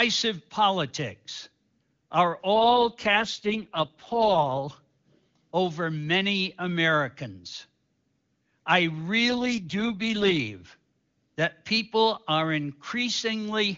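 Around 2.54 to 4.68 s, and again from 9.29 to 10.40 s, there's an AMR rate drop. The speech turns rough and raspy, which fits the codec falling from 23.85 to 6.6 kbit/s, then recovering cleanly, with no gap or bandwidth loss.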